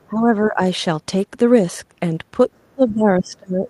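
From 0.09 to 0.6 s the speech dips by roughly 10 dB, and from 2.71 s to the end it sinks far deeper, around 25 dB. This is speech suppressed in double talk, likely an echo canceller muting its own talker while both sides spoke.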